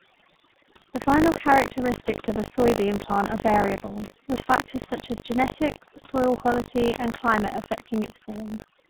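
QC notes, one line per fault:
Throughout: overdone noise removal. The background drops to near silence between phrases, with small twinkling specks where isolated frequency bands flicker on and off. The noise reducer is pulling any band that sits close to its noise estimate far down or out entirely. The quieter components of the speech fall into that range and are removed with the hiss.
Throughout: tandem speech coding. The speech is rough, muffled and warbly. The texture suggests two low-rate speech coders in series, consistent with iLBC at 15.2 kbit/s, then a G.711 A-law hop, then G.723.1 at 6.3 kbit/s. The final coder has to model speech already smeared by the first one, so the errors stack and the result is worse than either link would produce alone.
Throughout: buffer tearing. A steady robotic buzz at 50 Hz rides on the speech and disappears in the gaps, so it only appears when signal is present. 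The writer and reader of a ring buffer have drifted until they cross inside each period, which fits a 20 ms buffer period. In every period a small slice, on the order of 7 percent, is replaced with audio from roughly 70 ms earlier. The hard joins at both edges of that slice repeat at the period rate and produce the buzz.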